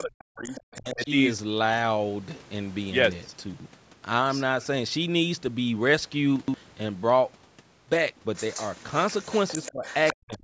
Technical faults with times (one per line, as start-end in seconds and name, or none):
0.00-1.08 speech suppressed in double talk
0.45-0.61 other side's voice leaking through
3.54-3.66 chunks out of order
6.36-6.54 chunks out of order
8.35-10.38 other side's voice leaking through
9.71-9.84 speech suppressed in double talk
10.14-10.43 speech suppressed in double talk